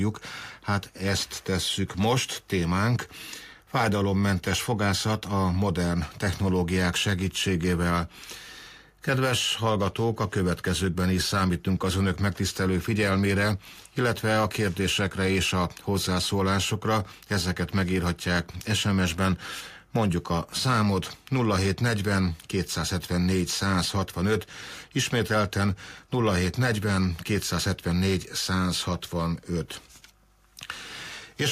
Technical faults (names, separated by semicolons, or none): none